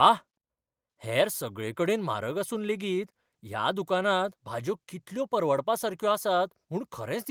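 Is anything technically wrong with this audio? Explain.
No, nothing technically wrong can be heard here.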